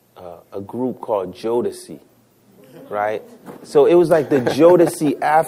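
Nothing stood out on listening.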